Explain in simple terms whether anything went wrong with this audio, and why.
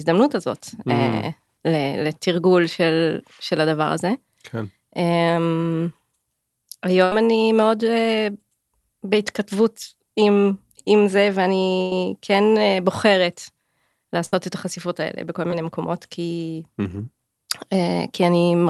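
Three bursts of packet loss interrupt the speech, at 7.04 to 7.12 s, 11.81 to 11.92 s and 14.25 to 14.35 s. In each, pieces of the call data arrived too late or not at all, so the receiver kept stretching the last sound and fading it out, a held buzz on voiced sounds or a fading hiss on others. About 70 ms, 100 ms and 60 ms of real speech are missing, and the talk jumps ahead when it resumes.

There is also a short concealed packet loss at about 15.5 s. Only about 10 ms of audio failed to reach the decoder in time. The receiver patched the hole by continuing the preceding sound for a fraction of a second and then blending back into the real signal. The result is a brief smear or wobble rather than a clear dropout, and a quick consonant at that spot could vanish. The call codec itself is working as designed, with its usual limit on the highest frequencies.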